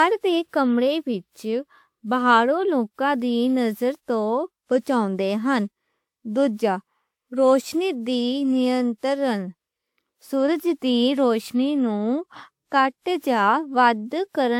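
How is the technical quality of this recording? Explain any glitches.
The speech is degraded by generation loss throughout. Its swirly, hollow texture and blurred attacks likely come from around seven passes through a lossy codec, consistent with WMA near 128 kbit/s, each adding noise and spectral holes.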